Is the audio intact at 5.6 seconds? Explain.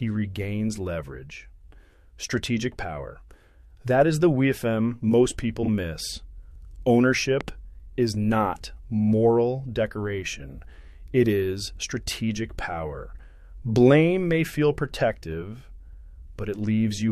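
No. Frames out of order occur from 5.63 to 5.69 s: two adjacent blocks, which fits single frames of about 23 ms each, were decoded in swapped sequence. That brief stretch plays with its halves exchanged, giving a garbled flutter, though no time is lost.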